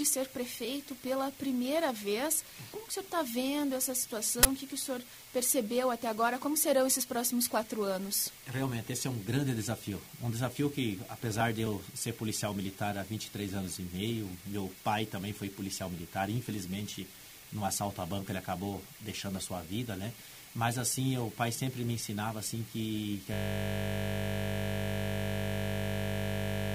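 The audio has two distinct glitches. At 4.43 s there's an uninitialised buffer: a 20 ms block went out to the output before any real audio had been written into it, so whatever junk was sitting in memory got played as samples. You hear it as a loud crack. Then from 23.34 s right through to the end there's a system hang loop. The machine or driver froze while the audio hardware kept cycling through its ring buffer, replaying the same 20 ms slice over and over. Because the loop is so short, it repeats 50 times a second and comes across as a steady, flat buzz at 50 Hz rather than a stutter. That points to a buffer of about 20 ms.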